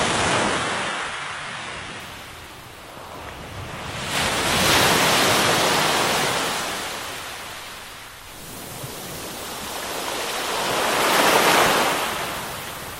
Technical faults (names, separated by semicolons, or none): adaptive stream starting at a low bitrate